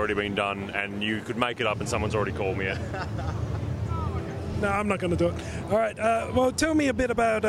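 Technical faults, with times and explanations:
No technical faults can be heard anywhere in this clip.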